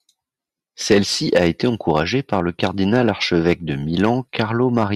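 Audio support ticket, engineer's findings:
Hard clipping on speech peaks, five events: 0.91–0.98 s, 1.36–3.10 s, 3.48–3.53 s, 4.04–4.40 s, 4.77–4.83 s. Peaks flattened, overdrive about 3 to 4 dB. Heard as crackle on loud syllables, sustained through the long 1.36–3.10 s stretch. Probable component: input gain stage or converter driven past full scale. Squared-off tops add high harmonics. Fix: reduce gain upstream.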